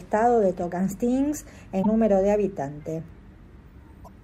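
At 1.82 to 1.86 s and again at 4.04 to 4.08 s, speech jumps ahead through a brief 44 ms glitch, likely a broken MP3 bit reservoir: after missing frames, the next one or two 26.1 ms frames decode from the wrong bytes. Each shows as a short vertical disturbance on the spectrogram and an abrupt break in the waveform.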